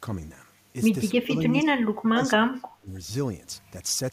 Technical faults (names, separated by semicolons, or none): speech suppressed in double talk